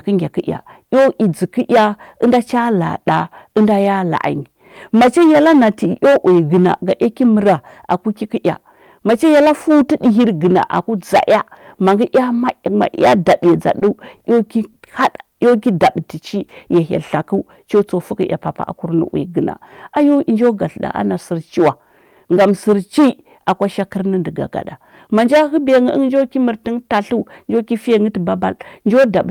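Throughout the speech, hard clipping is present: the signal is overdriven by about 13 dB, flattening roughly one sample in twenty. This adds harsh fuzz on loud syllables rather than the gentler thickening of soft saturation. At 13.79 s, 14.17 s and 14.72 s there are three short stalls from a late packet. The jitter buffer ran dry, so the receiver held the sound for 20, 30 and then 40 ms before resuming where it left off. Nothing is skipped, which distinguishes these from lost-packet gaps. From 18.75 to 19.16 s, a jitter buffer speed-up trims about 40 ms to reclaim that delay. The speech runs at 107% speed with its pitch unchanged, unlike a resampling error.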